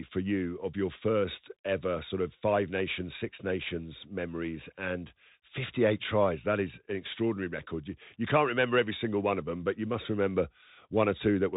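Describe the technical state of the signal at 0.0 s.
Bluetooth CVSD headset codec damage is present at 0.0 s and runs through the whole clip. The speech has been squeezed through a one-bit delta coder that only signals whether each sample steps up or down, adapting its step size as it goes, which fits a 64 kbps headset link. Nothing above 3.8 kHz survives, so the speech sounds boxed-in and narrow. S sounds come out scratchy, loud high-frequency moments smear into distortion, and a granular hiss sits beneath everything.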